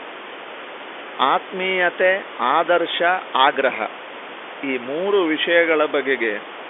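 No technical faults can be heard in this speech: it carries the narrow band of an ordinary telephone line, roughly 300 Hz to 3.5 kHz as G.711 coding passes it, with room noise sitting about 14 dB below the voice as part of the recording itself.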